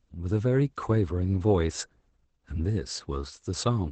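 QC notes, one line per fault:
throughout, Opus voice compression: the speech sounds muffled, hoarse and faintly robotic, with nothing audible above about 8.7 kHz. The codec is running in its SILK linear-prediction mode at wideband, cutting the top of the spectrum and coding the excitation coarsely. That leaves a buzzy, synthetic edge on the speech. The plainly audible damage fits a low bitrate of around 12 kbps, coded in 20 ms frames.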